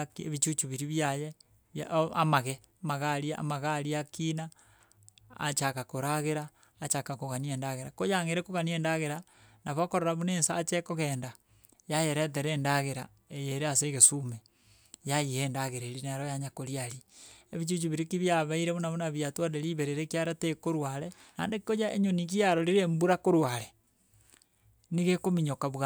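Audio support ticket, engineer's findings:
No audible faults found in the speech recording. No action required on the audio path.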